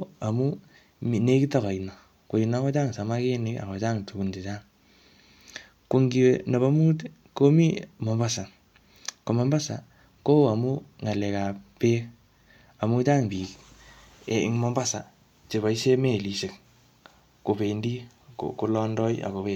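No technical faults can be heard anywhere in this speech.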